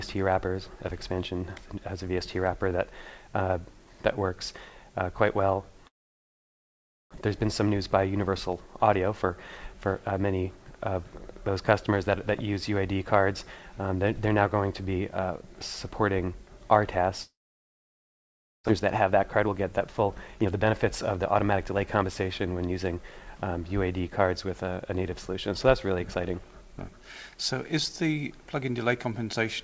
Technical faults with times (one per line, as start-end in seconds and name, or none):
5.88-7.17 long network dropout
7.26-10.13 jitter buffer speed-up
17.22-18.70 long network dropout
18.72-22.04 jitter buffer speed-up